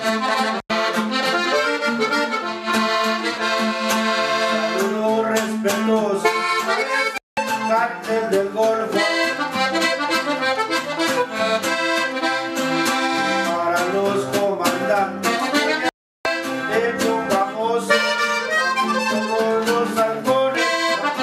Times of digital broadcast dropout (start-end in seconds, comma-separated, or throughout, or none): 0.60-0.70, 7.18-7.38, 15.89-16.26